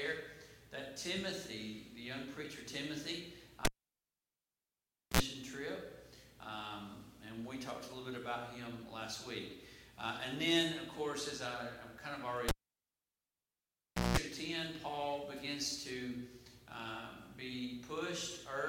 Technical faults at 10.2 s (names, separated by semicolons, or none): none